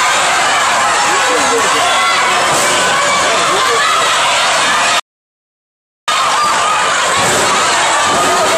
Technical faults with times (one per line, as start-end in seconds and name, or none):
5.00-6.08 playback stall
6.08-7.16 time-compressed catch-up